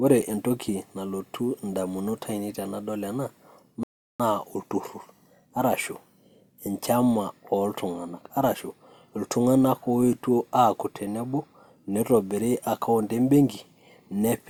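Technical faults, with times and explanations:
3.83–4.20 s, rebuffering stall: the speech drops to dead silence for about 0.36 s, then picks up at exactly the point where it broke off, with no syllable missing or repeated. The player has drained its store of downloaded audio and must wait for more data before continuing, so playback simply halts. Nothing is discarded; the gap only stretches the timeline, adding roughly 363 ms to the clip's running time.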